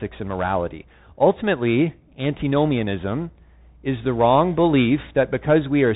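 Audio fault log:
throughout Bluetooth CVSD headset codec: the speech is coded one bit at a time with an adaptive step that can't track loud, fast changes, so peaks distort, s sounds turn scratchy over a granular hiss, and nothing above 3.8 kHz survives, fitting a 64 kbps link.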